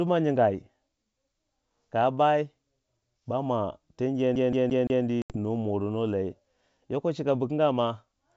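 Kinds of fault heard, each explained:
CD stuck on one turn: right after "bama ten" a 172 ms slice of speech repeats four times with tiny mutes, the quick even stutter of a skipping disc.
Packet loss on an ADPCM call: around 5.22 s an 80 ms hard-edged hole drops out, and the ADPCM decoder's predictor briefly falls out of step before the speech settles.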